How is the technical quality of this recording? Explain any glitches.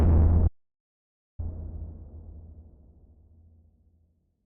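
The recording has one clear glitch: an audio dropout to silence from 0.48 s to 1.39 s. The sound cuts off abruptly and, for about 0.91 s, the output is silent, with no background or room tone underneath, before the audio resumes mid-flow. The likely cause is a momentary loss of the input signal, such as a link interruption or brief mute, while the recorder kept writing silence. Whatever occurred in that interval is not recoverable.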